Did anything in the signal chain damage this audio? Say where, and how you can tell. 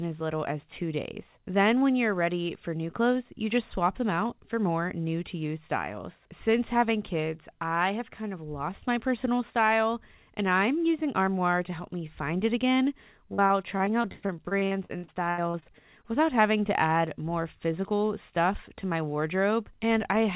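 Yes, at the network stage. Repeated packet loss (robotic sound) runs from 13.34 to 16.08 s, starting just after "me find it again" and clearing before "without having to add". Over that span about twenty short dropouts, the longest 106 ms, are patched by stretching the preceding audio. Roughly a quarter of the stretch is concealment. That is why it turns choppy inside a call path that otherwise tops out at 4 kHz, which fits G.711 mu-law.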